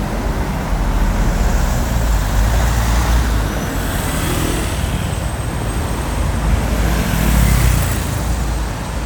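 Listening to this recording of sounds, nothing technical stood out.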